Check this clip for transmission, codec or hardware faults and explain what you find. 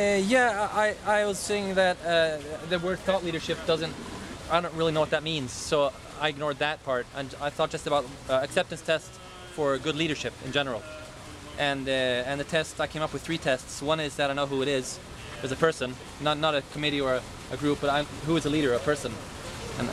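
Nothing here stands out as a transmission, codec or hardware problem; the audio holds together without any glitch worth flagging.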